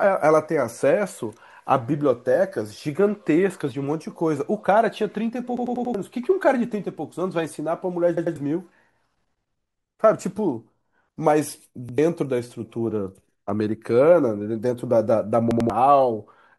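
At 5.57 s the speech stutters. One 93 ms slice plays four extra times, until 5.94 s. This is a repeated buffer. New audio arrived late, so the device replayed its last block. That block length fits a 4096-sample buffer. Each repeat meets the next at a hard join. At 8.17 s and 15.51 s there are shorter stutters, each with two extra plays. At 11.89 s one piece repeats once. About 400, 200, 100 and 200 ms of speech are lost.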